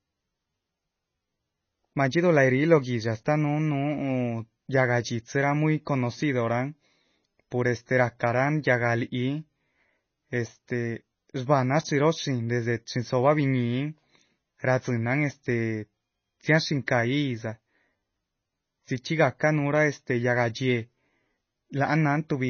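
Speech runs throughout with a watery, swirling texture and dull treble, nothing above 6.6 kHz, likely MP3 compression at a low bitrate, around 24 kbps.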